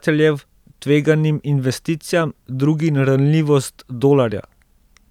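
No technical faults can be heard anywhere in the speech recording. The audio holds steady throughout, with nothing that calls for a timestamp.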